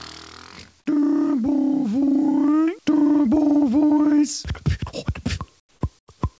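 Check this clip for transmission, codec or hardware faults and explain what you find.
One fault shows up near the end, heard through a wideband call path whose content stops at 8 kHz, which fits G.722. Comfort noise in place of the background appears twice: from 5.60 to 5.81 s, and from 5.99 to 6.08 s. Both times the real background drops out and a smooth, featureless hiss takes its place. The first patch is about 8 dB quieter than the background, and the second about 16 dB quieter. The likely cause is discontinuous transmission: the sender stops sending during the pause and the receiver synthesises rough-shaped noise to fill it. Unlike a dropout or noise gate, the gap never falls to true silence. It is the texture that changes, and then the level steps back up when the real background returns.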